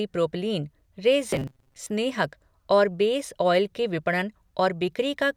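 Between 1.30 and 1.87 s, new audio likely arrived too seldom, so playback looped a short buffer and skipped around half the real speech. This robotic sound from repeated short buffers imposes a stiff metallic buzz at 133 Hz, which fits a buffer of about 7.5 ms.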